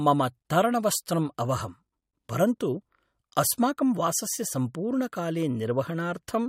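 Nothing in this speech recording shows a technical fault. There are no events to mark in time, since the audio runs without any interruption or sudden change.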